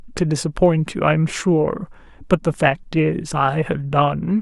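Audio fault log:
0.19–4.39 s, clock slip clicks: Faint ticks repeat about every tenth of a second, some forty in all. The likely cause is two unsynchronised clocks about 200 ppm apart. Each tick fits one sample dropped or repeated.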